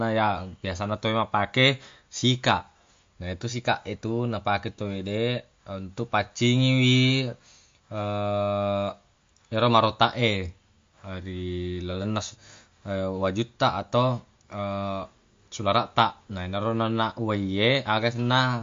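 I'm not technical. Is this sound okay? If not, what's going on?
No. The speech was likely squeezed by heavy MP3 compression throughout, cutting everything above 7.2 kHz, so it sounds dull, muffled, watery and swirly.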